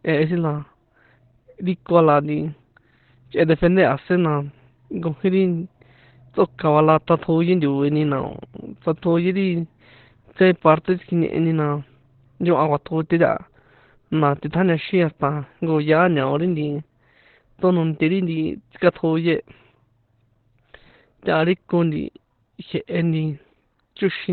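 Speech, heavily degraded throughout by what is likely Opus compression in its SILK speech mode: nothing survives above about 4.3 kHz, leaving a narrowband, muffled and hoarse sound. The damage fits a very low bitrate around 12 kbps.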